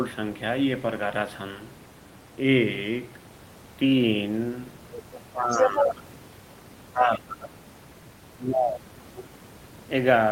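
At 4.91 s a second voice slips in under the talker for about a third of a second, running to 5.24 s, about 15 dB down. That's the other side's voice leaking through, most likely the far end playing from the loudspeaker and the echo canceller not fully removing it from the mic. It's back from 5.51 to 5.84 s, and this time it's roughly as loud as the talker, so the two voices sit right on top of each other.

That second leak overlaps the first case of speech suppressed in double talk, from 5.32 to 6.16 s. With both sides going at once, the canceller likely couldn't tell the talker from the echo and pulled everything down, so the near voice sinks by around 25 dB at its lowest. It happens again from 6.82 to 7.62 s, dipping deeper, around 35 dB, and once more from 8.28 to 9.32 s, where the voice drops by around 40 dB and nearly disappears. The room noise stays about 25 dB under the speech throughout.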